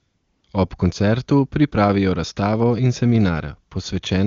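From 0 to 0.43 s the opening carries AMR comfort noise: the sending phone treated this stretch as silence and sent no speech frames, so the receiver generated a smooth, steady noise from a rough level-and-spectrum description in place of the real background, before wideband speech resumes.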